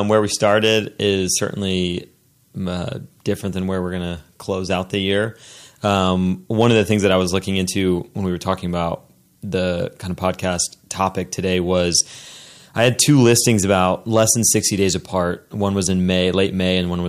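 Hard clipping at 6.60–7.16 s, before "was looking into when", and 12.80–14.31 s: peaks overdriven by about 2 and 3 dB crackle, appearing flat-topped in the waveform and smeared upward on a spectrogram.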